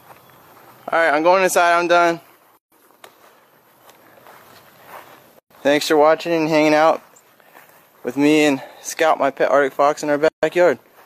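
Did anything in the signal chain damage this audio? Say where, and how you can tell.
Yes, at the codec stage, where separately encoded pieces were joined. There are three gaps at joins of encoded pieces: 2.58 to 2.72 s (about 144 ms), 5.39 to 5.51 s (about 116 ms), and 10.28 to 10.43 s (about 145 ms). Continuous sound drops to silence with smeared edges, then resumes where it stopped. Each encoder run's leading delay and padded final frame were left untrimmed, inserting dead air at every splice.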